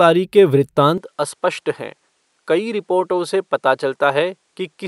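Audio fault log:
0.98–4.87 s, input switched to a poorer device: at 0.98 s the sound abruptly loses its top end, with nothing above 11.4 kHz from there to the end, drops in level by roughly 5 dB, and gains a faint new noise floor about 50 dB below the speech. There is no gap at the change. The likely cause is the system moving its input to a different, narrower-band microphone, whose own response, gain and self-noise replace the original path.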